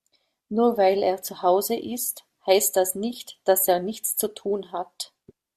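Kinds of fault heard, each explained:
No audible faults detected.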